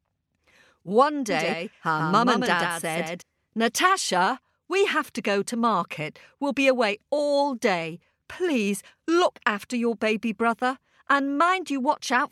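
A speech recording with a doubled audio track from 1.30 s to 3.22 s: a second full-band copy of the speech runs roughly 150 ms behind the original and about 5 dB quieter. The copy is dry, with no decay or room colour, and it begins and ends abruptly at those points. Such a fixed-offset duplicate is likely from the signal being captured a second time through a slower path, or from an edit leaving two misaligned copies overlapping.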